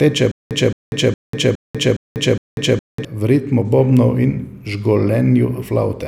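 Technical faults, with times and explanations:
0.32–3.05 s, stutter with silent gaps: a 219 ms burst repeats six times every 413 ms, separated by 194 ms of digital silence, likely a stalled stream replaying its last fragment while the intervening audio is lost.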